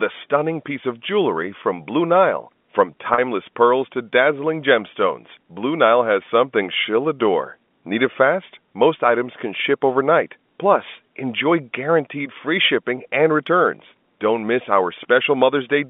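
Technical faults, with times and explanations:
3.14–3.18 s, packet loss with pitch repetition: 40 ms went missing, which fits two 20 ms packets, and the receiver looped the last pitch period, leaving a brief buzzy hold.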